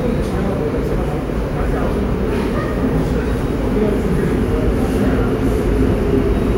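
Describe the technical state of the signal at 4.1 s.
At 4.1 s the sound in the clip comes through intact, with no audible fault at that moment.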